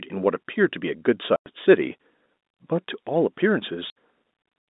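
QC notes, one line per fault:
1.36–1.46 s and 3.90–3.93 s: packet loss filled with silence. Lost packets were replaced by silence, leaving hard-edged holes. The 100 ms gap fits five 20 ms packets, heard over the 200 Hz–3.7 kHz G.711 telephone band.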